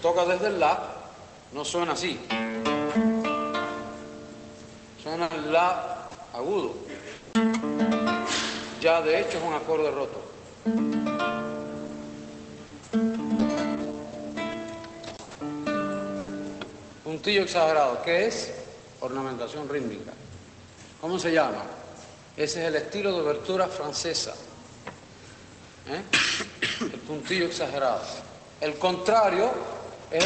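From 5.23 to 7.35 s there is repeated packet loss, giving a robotic sound. Four holes open in quick succession, the longest 160 ms. The receiver stretches the last sound over each one. About 280 ms goes missing, and the audio turns choppy.

From 12.67 to 16.31 s come scattered short gaps. Roughly three packets drop out, spread apart, none much over 70 ms. Each is patched by continuing the previous sound, covering about 5 percent of the stretch. The result is brief hiccups and small smears.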